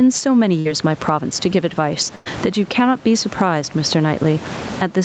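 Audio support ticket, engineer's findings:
Loud and soft parts pulled close together, levels squashed flat, across the whole speech clip; swing of around 20 dB. Gain pumping, likely from input gain set far too high with a fast limiter or compressor clamping every peak.

Burst of packet loss, 0.59–0.67 s: sound held and fading for about 57 ms, then resumes roughly 60 ms further on. Receiver concealment extending the last frame over late or lost packets; content in between gone.

Burst of packet loss, 2.15–2.28 s: longer held, decaying concealment of about 104 ms, no dropout to silence, around 100 ms of audio skipped. Same jitter buffer and decoder concealment covering a multi-packet gap; top end stopping near 8 kHz is the codec's normal bandwidth.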